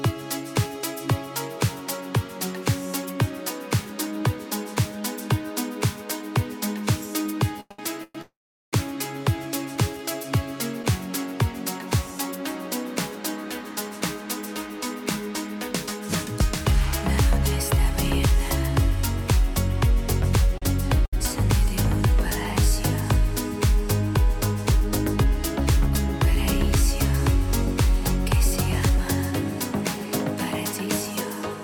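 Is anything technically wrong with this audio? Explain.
Yes. The audio has four kinds of delivery fault, all in the clip's second half except the first two.

Repeated stalls (stutter) run from 7.60 to 10.85 s. Packets arrived late again and again, so the jitter buffer kept running dry. The receiver filled each of four gaps by continuing the last sound, 294 ms in all, the longest 111 ms. Nothing is lost. But the sound drags and catches, with about 9% of that stretch made up of filled-in audio.

A call audio freeze sits inside that stretch, from 8.21 to 8.74 s. The sound halts for 512 ms. A brief continuation of the last sound fades out, and about 410 ms of it is silence. Then the audio resumes exactly where it stopped. The likely cause is packets held up in transit, emptying the jitter buffer. No audio is missing. A gap has been inserted, and everything after it is 512 ms later.

Short stalls from a late packet occur at 20.58 to 20.63 s and 21.06 to 21.14 s. 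Each time, a single packet was not there when due. The receiver stretched the last sound for 38 ms, then 70 ms, until it arrived. Nothing is skipped. A sound is simply held too long, with a faint buzz or dip.

Jitter buffer speed-up happens at 24.72 to 25.61 s and 28.89 to 30.88 s. Too much audio had built up in the buffer. To shrink the delay, the receiver cut many tiny pitch-period slices. Pitch stays the same, but playback runs 4% fast in the first stretch, removing about 50 ms. It runs 2% fast in the second, removing about 40 ms.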